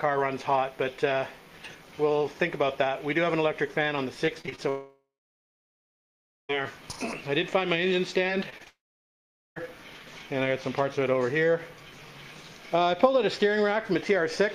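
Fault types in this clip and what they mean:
Repeated packet loss (robotic sound): Many short holes in the stream close together, each patched by stretching the sound just before it. From 4.25 to 4.60 s there are five gaps, the longest 24 ms, and about 30% of that stretch is patched. From 8.27 to 8.68 s there are four, the longest 21 ms, about 17% patched. Unlike a dropout, these gaps are brief, so the sound keeps going but breaks up.
Long network dropout: A single long stretch where nothing new is heard. The last sound is carried on briefly and then gives way to silence, and the audio resumes later with that part gone. From 4.69 to 6.51 s, roughly 1.8 s is lost and about 1.44 s of it is silent. From 8.68 to 9.58 s, about 0.9 s is lost with 0.8 s silent. The likely cause is a network outage, and it differs from packet loss in being one sustained gap.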